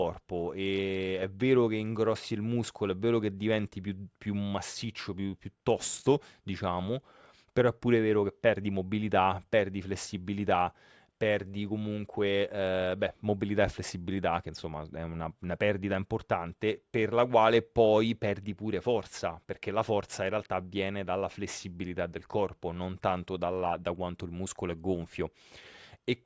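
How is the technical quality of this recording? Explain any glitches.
No glitches can be heard.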